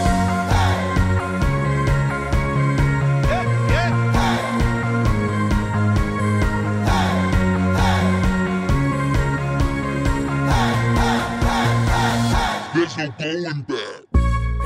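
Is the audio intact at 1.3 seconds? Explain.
Yes, at 1.3 seconds the audio plays through cleanly, with no dropout, click, distortion or other fault at that point.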